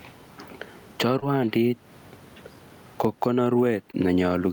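Gain pumping runs from the start of the speech to the end. The room noise normally sits about 40 dB below the talker. The level swings by roughly 15 dB, and loud and quiet syllables land close together, so the speech sounds squashed. The likely cause is gain set far too high at the microphone, with a fast limiter or compressor clamping down on each loud sound.

Short concealed packet loss occurs at 1.19 to 1.26 s. About 20 ms of audio failed to reach the decoder in time. The receiver covered the gap with roughly 24 ms of sound extended from what came just before, then trimmed about 7 ms as it blended back into the real signal. The result is a brief smear or wobble in the speech.

A second short concealed packet loss at 3.91 to 3.95 s replaces another 20 ms gap with about 19 ms of continued sound, heard as a brief smear.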